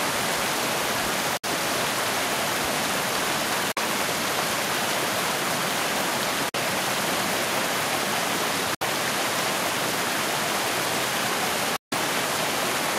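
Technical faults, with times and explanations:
1.37 s, 3.72 s, 6.49 s, 8.74 s and 11.76 s, Bluetooth dropout: the sound cuts to silence for about 61, 46, 46, 61 and 152 ms, then resumes further along, as if it had kept playing unheard. This is likely a wireless link losing audio packets that arrive too late to use; the gap lengths fit three or four lost packets, and about ten in the last. On a waveform each gap is a flat line; a spectrogram shows a clean vertical blank band across all frequencies.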